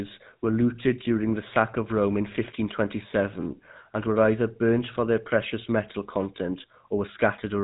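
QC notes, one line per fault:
Throughout: GSM full-rate codec. The speech has that buzzy, gravelly grain you get when a coder models the vocal tract and rebuilds the voice from a sparse train of regular pulses instead of the real excitation. The damage is plainly audible, and the sound fits the roughly 13 kbps full-rate GSM coder. Nothing comes through above 3.8 kHz, so the top end is gone and sibilants sound dull and boxed-in.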